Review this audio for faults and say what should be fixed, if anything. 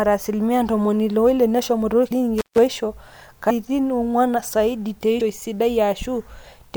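Compressed frames were skipped at 2.10 s, 3.49 s and 5.20 s. At each point the speech jumps forward. Roughly a tenth of a second of audio is lost each time. That fits four or five missing frames of about 24 ms each. The decoder found those frames absent or damaged and played on without them. Prevent this by checking file integrity after transfer and re-encoding from an intact source.

An intermittent contact appears between 2.38 s and 2.58 s. The signal drops out for about 148 ms. Crackle marks both edges as the connection breaks and then makes contact again. While the line is open, faint hiss remains. A loose plug or cable is the cause. Prevent this by reseating or replacing the cable and connectors before recording, and securing them against movement.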